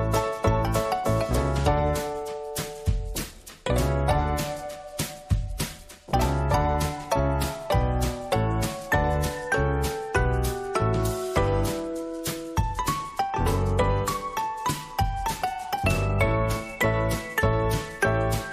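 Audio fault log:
Nothing stood out on listening to this clip.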